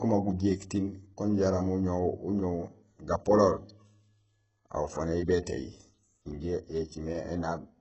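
Throughout, the speech shows heavy HE-AAC compression, likely at a bitrate around 8 kbps: rebuilt treble up to 7.9 kHz sounds gritty and lispy rather than simply dulled.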